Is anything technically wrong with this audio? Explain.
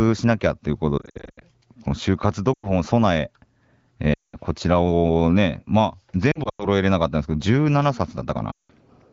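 Yes, there are lost AMR speech frames in five spots: 0.98–1.43 s (about 280 ms of gaps, runs up to 80 ms), 2.53–2.70 s, 4.13–4.35 s, 6.31–6.66 s (gaps up to 100 ms), and 8.52–8.71 s. The decoder covers corrupted frames by stretching the last good pitch and tract shape while fading the gain, so you hear smeared, warbly sound that drops toward silence and comes back a bit rough.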